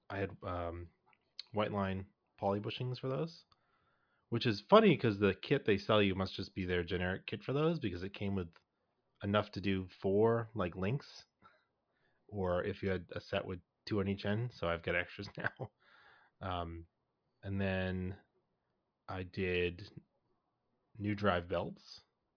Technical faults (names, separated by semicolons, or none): none